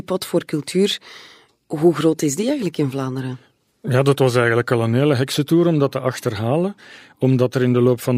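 No technical faults can be heard anywhere in the speech recording, which runs as a single continuous, stable signal.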